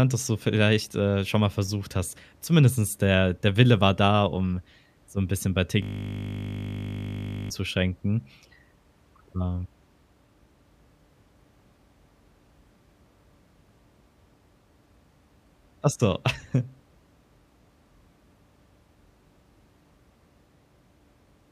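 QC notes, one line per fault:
5.82–7.50 s, system hang loop: the speech stops advancing and one 20 ms slice of audio repeats exactly, back to back, for about 1.7 s. The system or its audio driver stalled while the sound hardware kept replaying the same ring buffer, which fits a buffer about 20 ms long. Because the slice is so short, the repeats fuse into a steady 50 Hz buzz rather than a stutter.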